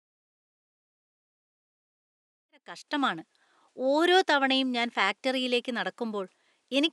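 Listening to the speech, nothing stood out as a technical problem: the faint room noise sits about 47 dB below the voice, and the smooth fade-in that begins around two and a half seconds reaches full level at 3.2 s.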